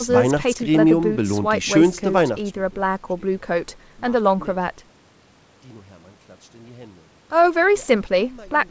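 No technical faults can be heard anywhere in the speech. The sound stops at 8 kHz, which fits a wideband call codec such as G.722, and its level rises and falls smoothly as if a fader were being moved.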